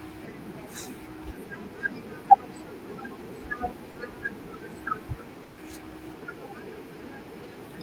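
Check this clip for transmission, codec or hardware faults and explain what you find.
Two short dropouts appear in the speech. From 3.91 to 3.95 s (40 ms) and from 5.43 to 5.57 s (140 ms), the speech drops out. This is likely sound dropped by the voice detector: a discontinuous-transmission scheme such as Opus DTX judged part of the sound to be background, stopped sending, and the receiver filled in comfort noise. The room noise, about 38 dB below the speech, belongs to the recording itself.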